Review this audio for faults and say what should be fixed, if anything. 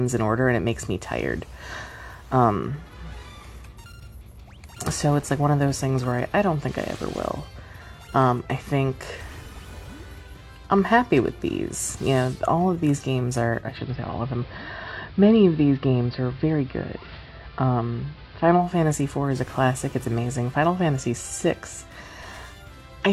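Digital radio blending to analogue from 13.58 to 18.76 s: a 214 ms cross-fade to AM adds hiss roughly 30 dB down, and drops the level about 1 dB. To prevent it, improve digital reception or disable analogue blending on the receiver.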